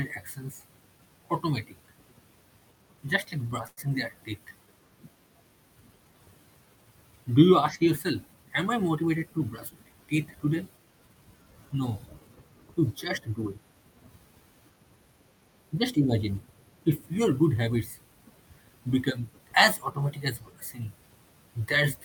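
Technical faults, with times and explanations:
3.67 to 3.79 s, short stall from a late packet: A packet arrived late and the jitter buffer ran dry. The receiver stretched the last sound for 97 ms, then resumed where it stopped. Nothing is lost, but that sound hangs too long, and everything after runs 97 ms later.
8.95 to 9.93 s, jitter buffer speed-up: The buffer held more audio than it aims for. To cut that extra delay, the receiver removed short pitch-period pieces many times in a row, about a tenth of a second in all. The speech plays at 110% speed with unchanged pitch and sounds hurried.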